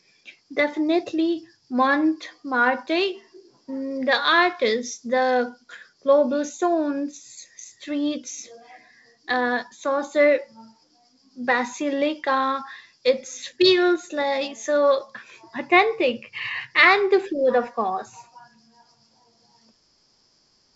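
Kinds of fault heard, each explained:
No kinds of fault are heard in this speech, so there are none to explain.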